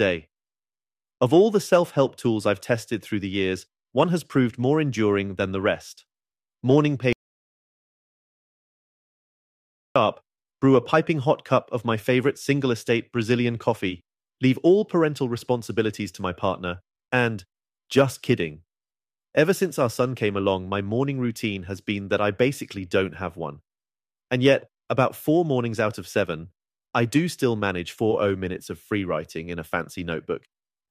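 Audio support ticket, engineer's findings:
Speech cuts out mid-flow at 7.13 s, returns at 9.96 s: about 2.83 s of dead silence, no room tone. Audio dropout to silence, likely an input path lost (device disconnect, link failure or mute) while the recorder kept writing silence. Content in gap unrecoverable.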